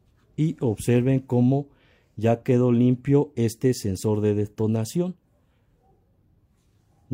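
No dropout, distortion, glitch or other technical fault can be heard anywhere in the clip.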